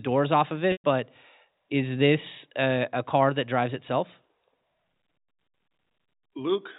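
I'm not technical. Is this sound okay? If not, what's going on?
No. At 0.72 s there's packet loss with pitch repetition: about 120 ms of speech went missing, and the phone filled the hole by repeating the last bit of voice and fading it out, ending around 0.84 s.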